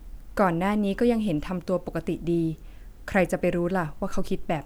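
Listening through the speech, nothing stood out as a technical problem at any point.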